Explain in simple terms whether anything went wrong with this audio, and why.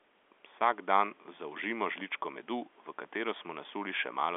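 Nothing went wrong here: the faint background noise is just ordinary room noise sitting well below the speech, and the narrow, phone-like tone comes from normal telephone line coding, so both are simply part of how the recording was made, not signs of anything broken.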